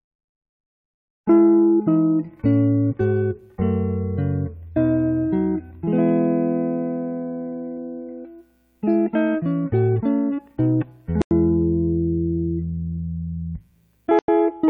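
At 7.77 s there is a single tick, peaking at about -38 dBFS. It lasts only a few milliseconds. This is a corrupt FLAC frame. Bits in one frame were flipped, and the decoder did not reject it on its checksum. From the damaged point, the prediction ran on wrong values. The error dies out quickly, so it comes across as a small, sharp click rather than a burst of noise.

At 11.22 s the sound cuts out abruptly. It stays silent for 94 ms, then resumes at 11.31 s. A second identical gap runs from 14.19 s to 14.28 s, also 94 ms. Both are a corrupt frame muted. The decoder refused damaged compressed frames, and the player put silence in their place. No time is lost; the sound picks up exactly on schedule.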